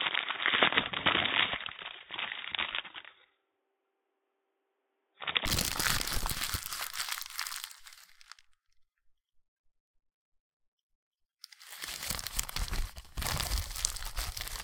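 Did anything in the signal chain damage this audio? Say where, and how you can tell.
Yes, at the input stage. From 0.0 to 5.45 s the sound is band-limited, with nothing above 3.8 kHz. It has a dull, boxy quality and a faint noise floor, roughly 50 dB below the signal. At 5.45 s the top end opens up at once, with no gap and no real change in level. This is likely an input switched to a poorer device, such as a headset call profile, before the system moved to a fuller-range microphone.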